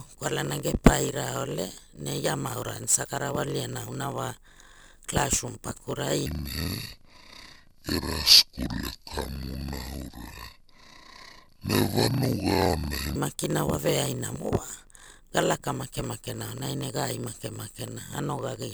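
A block size mismatch (padded) runs through the whole of this speech recording. An upstream stage hands over blocks shorter than the 1024 samples the next stage reads, and each block's missing tail is filled with zeros. Every block therefore carries a brief silent gap, which turns into a steady buzz at about 46.9 Hz, the block rate. The inserted silence stretches the audio to 0.938 times normal speed, about 6% slow, while the timbre stays the same. The second fault is a section at the wrong speed from 6.26 s to 13.16 s, between "klasrum pakurai" and "makina wa veaina". This part was likely played against the wrong clock, so it runs at 0.582 times normal speed. Because speed and pitch move together here, the passage drops roughly ten semitones and sounds deep and dragging until normal speed returns at 13.16 s.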